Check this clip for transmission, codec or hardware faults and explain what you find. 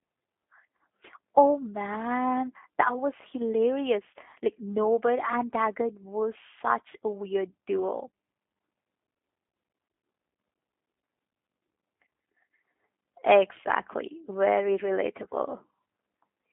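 One codec fault runs through the whole clip. G.729 codec, throughout: speech is rebuilt from a vocal tract filter, pitch predictor and sparse pulses, sounding rough and synthetic, band-limited to 250 Hz to 3.5 kHz, which fits an 8 kbit/s link.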